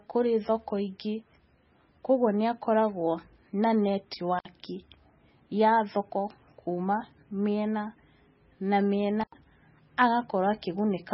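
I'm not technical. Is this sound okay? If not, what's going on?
No. Two things are wrong with this speech recording.

Throughout the clip the sound is dull and heavily watery, the likely result of heavy MP3 compression. Everything above about 5.6 kHz is missing, so s sounds lose their crispness, and the swirling or chirping comes from the encoder dropping quieter detail that flickers in and out. Unlike a cable fault, this damage never stops. It colours the whole clip.

There are also two brief cut-outs from an intermittent contact, such as a loose plug or cable. The first runs from 4.39 to 4.46 s with a gap of about 64 ms, and the second from 9.21 to 9.35 s with a gap of about 89 ms. Each one has a crackle as the connection breaks and returns, and faint hiss fills the gap. The crackle at the edges is what separates this from the steady compression damage.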